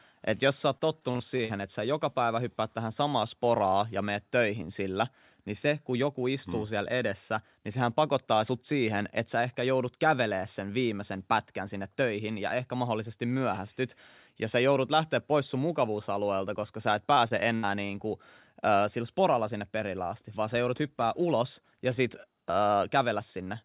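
A speech recording carried over a narrowband call path with nothing above 4 kHz, which fits G.711 mu-law telephony, shows repeated packet loss (robotic sound) from 0.78 to 1.51 s and again from 17.15 to 17.91 s. Short runs of audio went missing (the longest gaps about 41 ms and 76 ms) and were patched by stretching the preceding sound, so the speech turns choppy. On a spectrogram the harmonics smear into flat, repeated blocks. The waveform shows copied cycles and small seams.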